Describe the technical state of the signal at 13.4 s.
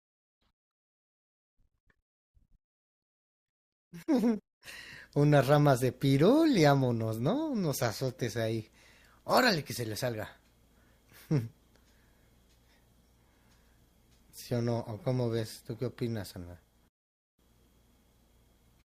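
At 13.4 s you're right in the middle of a drop to an adaptive stream at a lower bitrate, running from 11.56 to 15.56 s. The player switched down to a leaner encoding for those four seconds, probably because the connection slowed. The speech picks up more codec artefacts. The change in and out is abrupt but gapless. It sounds like a step from roughly 64 down to 24 kbit/s Opus.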